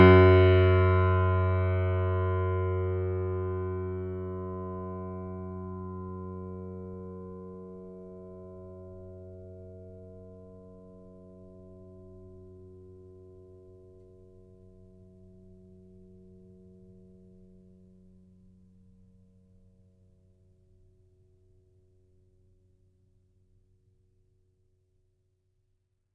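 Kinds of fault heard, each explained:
No faults are audible anywhere in this music.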